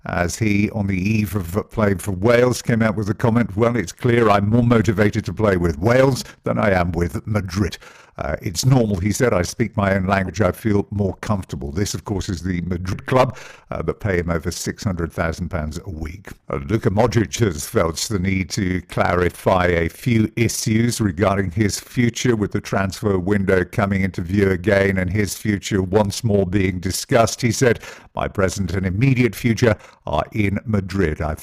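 From start to finish the speech carries overlap-add ripple. The frames were rejoined with overlapping windows whose gains do not sum evenly, so the level swells and dips by about 6 dB once per frame, around 20 times a second. The result is a fast flutter or rough tremolo. This flutter is locked to the frame rate and never changes speed.

Compressed frames are skipped at 4.51 s, 7.68–7.70 s, 10.27–10.30 s, 12.92–12.94 s and 18.54 s. Each time, whole frames never reach the output, and the speech jumps forward by around 70 ms at 4.51 and 10.27, around 100 ms at 7.68 and 12.92, and around 40 ms at 18.54. Those jumps fit multiples of a 10 ms frame. A dropout would leave a gap of silence, but here nothing is silent and time simply lurches ahead.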